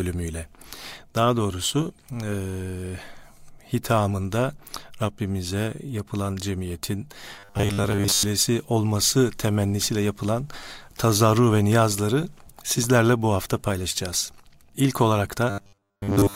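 Speech, with robotic sound from repeated short buffers at 7.36 to 8.23 s, after "yapılan cemiyetin", and at 15.50 to 16.35 s. Each stretch becomes a rigid metallic buzz at 100 Hz. It likely comes from a 10 ms buffer looping while most real audio is skipped.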